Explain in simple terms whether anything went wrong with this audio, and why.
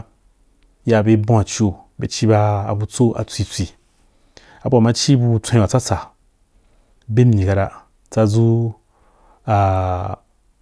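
Nothing went wrong with this audio, and the speech sounds just as it should all the way through.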